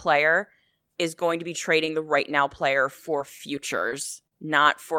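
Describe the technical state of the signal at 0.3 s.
At 0.3 s the speech signal is intact, with no audible dropout, distortion, glitch or other technical fault.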